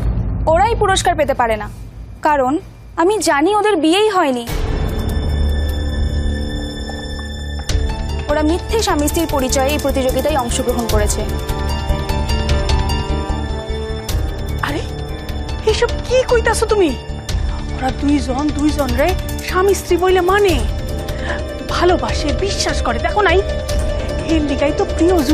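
There are no technical faults to describe at any point in the audio.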